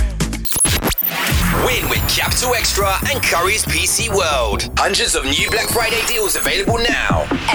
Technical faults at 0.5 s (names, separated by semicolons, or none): none